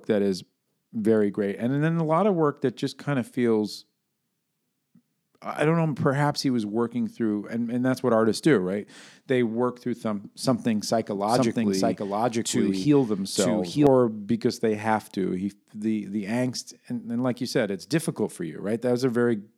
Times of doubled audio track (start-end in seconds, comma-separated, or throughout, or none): 11.15-13.87